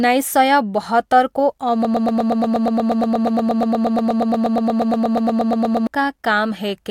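Right after "सय बहत्तरको", at about 1.85 s, the speech turns into a broken-record loop: a tiny fragment of about 0.12 s repeats exactly, back to back, 34 times, until 5.87 s. It comes across as a fast, machine-gun stutter lasting around four seconds, and whatever should have been said in that stretch is simply gone. The likely cause is the player or stream stalling and resending the last chunk it had buffered.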